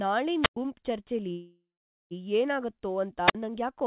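At 0.41 s a wireless microphone squelch dropout starts. The radio link from the microphone fades. Hiss rises briefly, then the receiver's squelch shuts the output. About 107 ms of near silence follows. The speech comes back by 0.57 s. The same fault returns at 3.25 s and lasts to 3.35 s. This time the mute is shorter, about 49 ms, with the same rise of static before it.

Between 1.32 and 2.14 s there is a call audio freeze. The last sound hangs on as a fading buzz, then goes silent for about 430 ms. The speech picks up where it stopped. About 787 ms of gap has been added, and nothing is lost. The likely cause is delayed packets draining the jitter buffer. The call path's band limit, with nothing above 4 kHz, fits G.711 mu-law.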